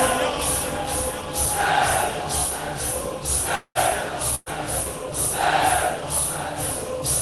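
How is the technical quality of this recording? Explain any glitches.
Two short gaps interrupt the recording, heard through a call codec that softens the top end above about 12 kHz.

From 3.55 to 3.78 s, a long network dropout is the likely cause: the last sound stretches into a fading buzz or hiss, then about 80 ms of silence. This is longer and emptier than a burst.

From 4.35 to 4.49 s, a burst of packet loss removes about 120 ms. The concealment fades briefly and the sound resumes almost immediately, with only a trace of silence.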